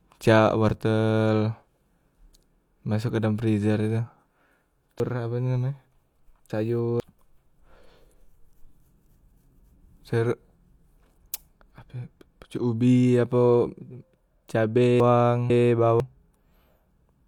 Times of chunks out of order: 5.00-7.00, 15.00-16.00

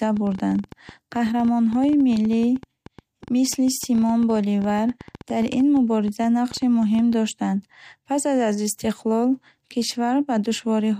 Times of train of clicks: 0.03-7.14

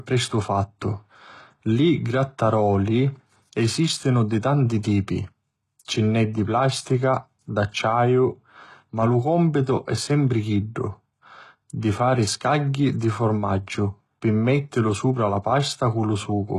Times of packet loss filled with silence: none

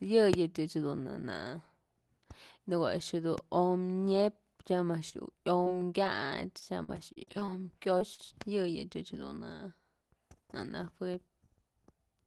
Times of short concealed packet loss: 5.09-5.14, 5.64-5.68, 6.04-6.07, 7.99-8.20

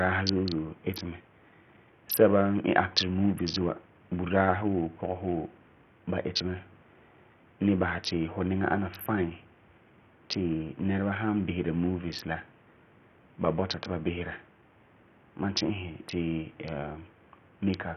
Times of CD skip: none

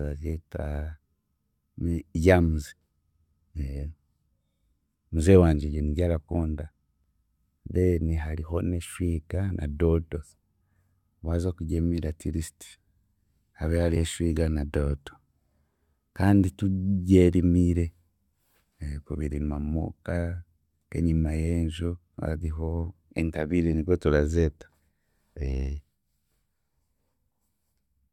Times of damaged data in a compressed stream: 7.04, 10.60, 13.95

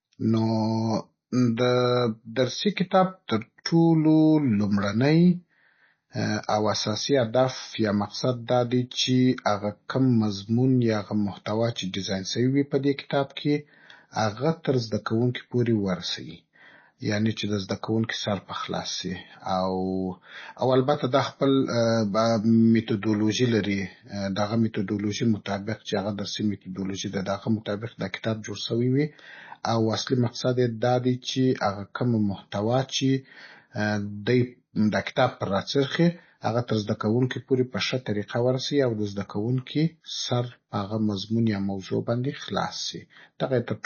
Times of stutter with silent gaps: none

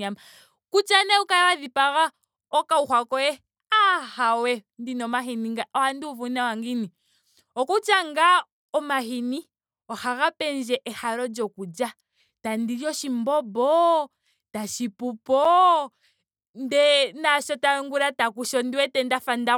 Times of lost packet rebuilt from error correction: none

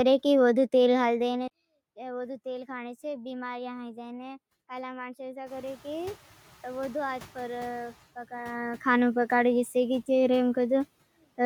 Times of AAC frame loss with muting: none

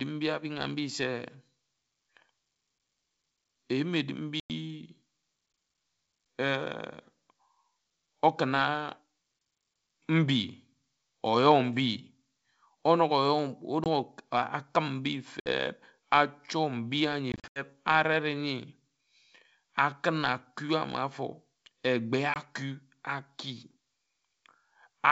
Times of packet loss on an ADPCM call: 4.40-4.51, 13.84-13.87, 15.40-15.48, 17.32-17.62, 22.34-22.36

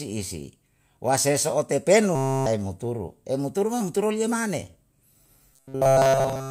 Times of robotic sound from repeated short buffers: 2.15-2.47, 5.53-6.50

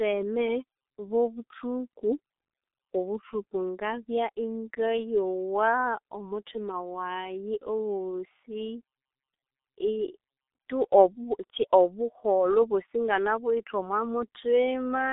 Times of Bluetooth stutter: none

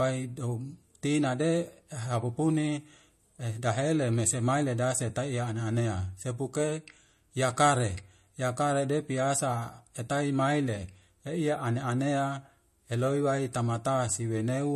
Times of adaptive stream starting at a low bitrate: none

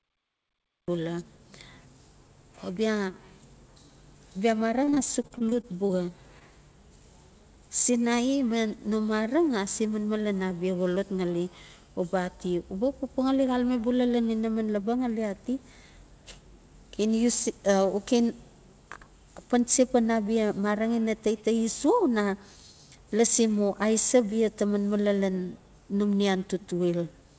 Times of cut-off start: 0.00-0.88

